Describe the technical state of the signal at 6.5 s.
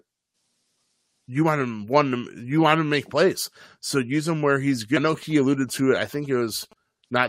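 GSM signalling bursts run from 5.23 to 6.73 s. A nearby 2G phone's radio pulses are rectified into galloping ticks and 217 Hz buzzes about 25 dB below the speech, seen as spiky pulse clusters.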